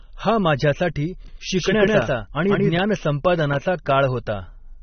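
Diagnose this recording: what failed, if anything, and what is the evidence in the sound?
At the codec stage, the speech has nothing above 6.3 kHz throughout, and the codec damage is plainly audible: dull, smeared sibilants with a warbling texture. That points to likely AAC compression at a low bitrate. Unlike a simple low-pass filter, the cut-off comes with spectral smearing.

A doubled audio track runs from 1.28 to 2.78 s. A full-band copy trails by about 150 ms at about the same level, starting and stopping abruptly. The lack of decay or room colour rules out acoustic echo, making a second capture path or an edit the likely cause.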